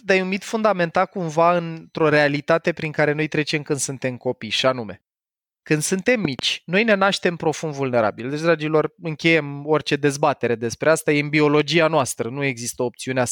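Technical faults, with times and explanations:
6.25 to 6.41 s, loud pop: a sudden voltage step or pulse, likely from a plug, switch, static discharge or driver glitch, enters the signal chain. The following circuits shape it into two sharp pops, roughly 10 dB above the speech, which carries on underneath.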